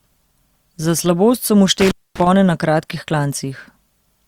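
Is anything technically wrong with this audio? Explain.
Yes. From 1.80 to 2.27 s, after "so mu" and before "na kratkih", there is an intermittent contact: a loose cable or plug briefly opens, cutting the speech for about 244 ms with crackle at both edges and faint hiss underneath, unlike a clean digital dropout.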